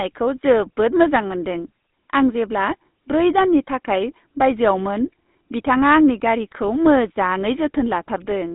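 The speech has passed through the GSM full-rate codec for its whole length, a coder that fits a 13 kbps channel. It models the vocal tract and drives it with a coarse, regularly spaced pulse excitation, so fine detail in the source is thrown away. The result is a plainly audible buzzy, gravelly roughness on the voice, heard through a narrow line band of about 200 Hz to 3.7 kHz, which leaves the speech thin and dull.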